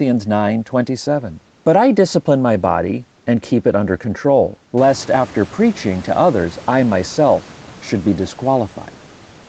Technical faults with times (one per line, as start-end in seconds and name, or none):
none